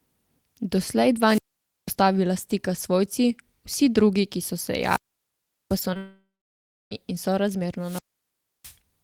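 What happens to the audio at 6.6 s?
At 6.6 s there is only silence. It falls within a likely long network dropout from 5.97 to 6.93 s. The last sound fades as a buzz or hiss, and the lost audio never returns.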